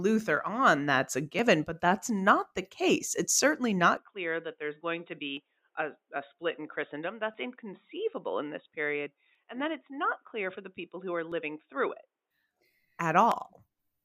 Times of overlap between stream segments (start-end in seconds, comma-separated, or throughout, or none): 1.39, 3.36-3.39, 5.37, 7.34-7.37, 9.35, 11.32, 13.32